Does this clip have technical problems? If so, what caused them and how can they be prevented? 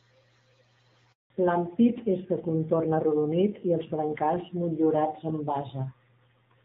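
Yes. Handover gap, from 1.12 to 1.30 s: the speech fades out within a few tens of milliseconds and is followed by 180 ms of silence. The call was passed from one network link to another, and no speech frames were delivered while the new link came up, so that stretch of speech is lost rather than delayed. Keeping the call on one cell or network during important speech, or using a terminal and network that support seamless handover, prevents it.

Fallback to narrowband, from 1.30 s to the end: after the gap, everything above 4 kHz is gone and the speech sounds duller and rougher. Before the switch, the light coding of the AMR wideband (HD Voice) codec carries content up to about 7 kHz. The sound afterwards points to the new link renegotiating down from AMR-WB at 12.65 kbit/s to AMR-NB at around 7.4 kbit/s, a narrowband codec that cannot carry the upper band. Ensuring both networks and devices support HD Voice end to end prevents it.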